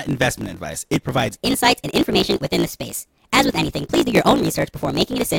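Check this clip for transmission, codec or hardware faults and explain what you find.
Two faults in this speech clip, one running the whole way through and one starting partway in.

Block size mismatch (truncated), throughout: the end of each block gets dropped, so there's a 45.9 Hz buzz, and the speech runs about 1.07 times fast at near-normal pitch, which fits 1024-sample blocks.

Section at the wrong speed, from 1.35 s to the end: playback jumps to 1.25 times speed, with pitch rising about four semitones, hurried and high, likely from the wrong clock.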